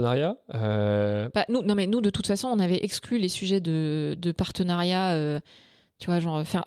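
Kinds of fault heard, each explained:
No kinds of fault are heard.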